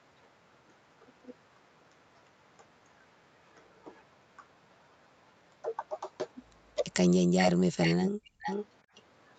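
Speech heard over a call, band-limited at 8 kHz and carrying Opus coding, holds two audible faults near its end. Between 7.28 and 7.38 s and again from 8.15 to 8.2 s the voice drops out almost completely, by roughly 40 dB. This is speech suppressed in double talk, likely from an echo canceller that ducked both sides while they overlapped. Delayed copies of the voice trail in at 7.4–7.52 s (about as loud as the speech), 7.82–8.11 s and 8.42–8.66 s (about 10 dB down), and faintly at 8.95–9.02 s. Each copy lags 444 ms behind the original, likely the mark of an echo leak where loudspeaker pickup slipped past the far end's canceller and was sent back.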